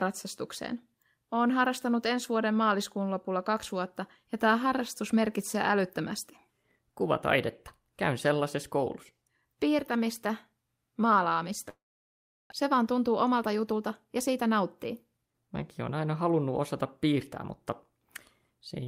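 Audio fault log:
11.69–12.54 s, long network dropout: the sound smears into a brief fading buzz, then goes silent for about 0.73 s, and resumes with roughly 0.6 s of audio gone, likely from lost packets. The waveform shows a short decaying tail, then a flat gap; the spectrogram shows a blank band.
12.62–15.49 s, jitter buffer speed-up: after the gap the audio runs at about 107% speed with unchanged pitch. Pitch-period-sized pieces are repeatedly cut to shed around 200 ms of built-up delay, so it sounds hurried. The spectrogram shows harmonics at normal spacing but compressed in time.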